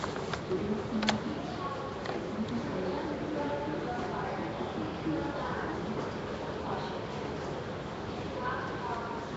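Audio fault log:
Throughout: Nellymoser compression. The sound carries a rough, hissy halo and a smeared, underwater character, with nothing present above 7.8 kHz. This points to the Flash-era Nellymoser Asao codec as the likely cause, at a rate that fits 32 kbps. It codes short fixed blocks with a thin, constant bit budget. Weaker bands receive no bits and are refilled with noise, which produces the hiss. The coarse block coding smears detail over time.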